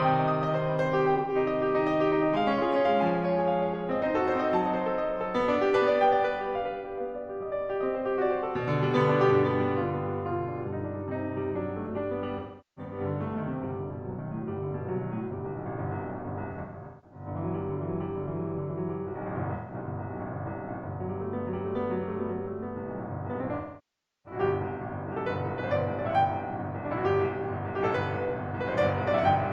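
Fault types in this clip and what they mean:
AAC frame loss with concealment: pieces of the compressed music stream went missing, and the decoder filled each gap by reusing the last good spectrum. The two short gaps near 1.16 s and 19.55 s sound like brief smeared, noisy patches. The longest, near 23.56 s, decays toward silence, then fades back. A spectrogram shows blurred, stretched blocks with lost transient detail. The waveform shows a sagging envelope where the fill-in fades.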